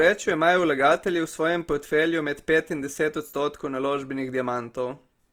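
Throughout the speech, the sound is grainy and rough rather than swirly, with full bandwidth kept up to about 20.2 kHz. The likely cause is Opus compression in its music mode at a rate that fits roughly 24 kbps, filling bands with noise instead of MP3-style holes.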